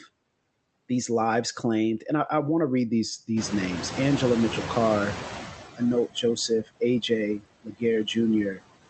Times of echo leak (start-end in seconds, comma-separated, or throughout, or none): none